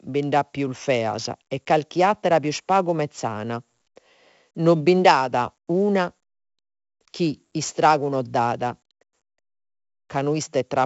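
The speech carries 4-bit ADPCM compression from the start. Each sample is coded as a coarse step from a prediction, leaving a gritty hiss that rises and falls with the speech, heavy here, with rough attacks. Nothing sounds above 7.7 kHz, which fits a 64 kbps stream at a 16 kHz rate. Unlike ordinary noise, the hiss vanishes in pauses.

From 0.16 s to 10.68 s, faint clock slip clicks tick about every fifth of a second, some fifty in all. Each is a single sample dropped or repeated, likely from two unsynchronised clocks drifting about 100 ppm apart. Their steady spacing and lack of any gap distinguish them from packet-loss dropouts.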